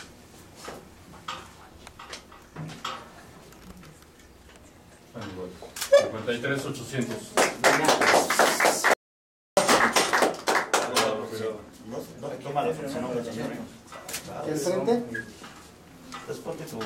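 The input feed was likely interrupted, by a lost link, disconnected device or accidental mute, while recording continued, producing an audio dropout to silence from 8.94 to 9.57 s. For about 0.64 s the sound cuts to silence with no room tone, and whatever occurred then is lost.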